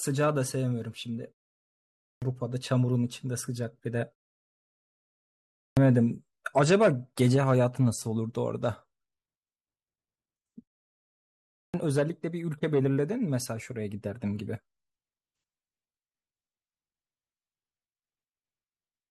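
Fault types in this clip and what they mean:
Clipped start after a pause: the playback path powers down or loses lock during silence and takes time to come back, so whatever arrives first after a gap is cut away. Here it happens three times, at 2.03 s, 5.58 s and 11.55 s, after pauses of about 0.8 s, 1.5 s and 1 s. Each time roughly 190 ms of the onset is missing, so speech jumps in abruptly without its opening sounds.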